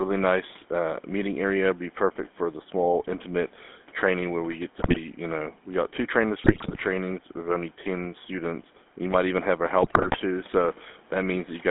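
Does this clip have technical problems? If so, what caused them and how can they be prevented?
Yes. The GSM full-rate codec runs throughout: it models the vocal tract with a pulse-driven excitation inside a 200 Hz to 3.5 kHz band, so the speech sounds buzzy and gravelly. A wideband codec would prevent this.

GSM bit errors occur at 4.78 to 4.98 s, 6.44 to 6.83 s and 9.82 to 10.17 s: corrupted filter, pitch and gain values distort those frames into squawks and gargling. A stronger radio link would prevent them.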